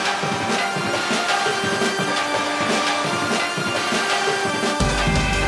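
No technical faults can be heard anywhere here.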